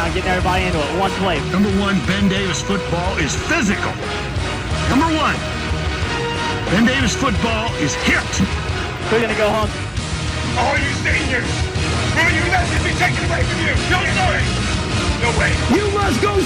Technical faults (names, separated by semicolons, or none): dropped buffer (overrun)